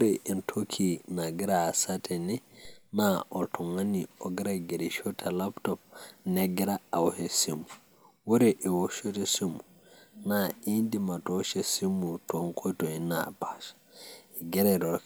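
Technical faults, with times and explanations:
2.65 s, DC step: the waveform's zero line jumps by an offset of about -42 dBFS, then slides back as a 2 Hz high-pass drains it away, heard as one soft low thump. Unlike a dropout or glitch click, the speech continues unbroken straight through it.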